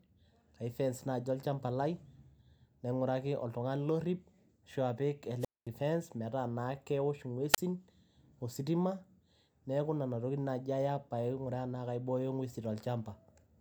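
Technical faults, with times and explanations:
5.39–5.68 s and 7.53–7.58 s, wireless microphone squelch dropout: the radio link fades, hiss swells, then receiver squelch mutes the speech for about 220 ms and 32 ms respectively.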